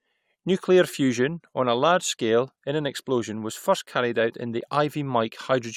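It's a short speech clip with one fault: an overlap between stream segments at about 4.61 s, right after "first carried out in". Two chunks of the stream claimed the same stretch of time, and the player trimmed the overlap from audio that wasn't actually duplicated. So roughly 12 ms of real sound just disappears and the waveform jumps across the gap, which you hear as a quick click or tiny skip in the speech.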